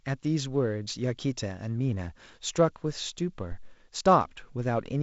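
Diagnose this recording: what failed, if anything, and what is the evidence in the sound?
A phantom power thump in the analogue input wiring sits from 3.52 to 3.82 s: a deep, low-frequency thud whose body dies away in about 68 ms. A supply switching on a live input steps the DC across the coupling capacitors. Unlike a plosive, it has no breath onset, and the band-limited telephone sound stays unchanged.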